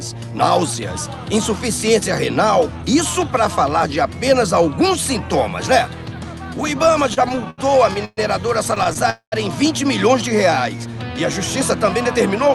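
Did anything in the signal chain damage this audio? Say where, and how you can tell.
Yes, and it's all in the network and jitter-buffer stage of the call path, not the Opus codec, whose coding noise and roughly 12 kHz top end you can hear throughout.

Repeated stalls (stutter) show up first from 6.83 to 8.19 s. The sound keeps hitching, twelve little holds in that stretch, the longest about 123 ms, covering around 0.31 s in total. Then there's a lighter patch from 8.75 to 9.06 s with four tiny hitches of up to 12 ms. Packets were arriving slower than playout, so the buffer kept running dry and the receiver stretched the last bit of sound to cover each wait. Nothing's lost; it just drags.

Right after, at 9.10 to 9.34 s, there's a call audio freeze. The sound hangs for about 0.22 s, with the held tail dying away into roughly 110 ms of silence before the audio picks up exactly where it left off. 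That points to packets likely held up somewhere on the network. The buffer emptied, concealment filled the gap, and the whole stream came out about 0.22 s later than before.

At the end, from 11.86 to 12.49 s, you get a jitter buffer speed-up. The audio runs about 6% fast at unchanged pitch, so it sounds slightly rushed. The buffer had built up that extra delay and was draining it by snipping out tiny pitch-period slices, around 40 ms in all, to pull latency back down.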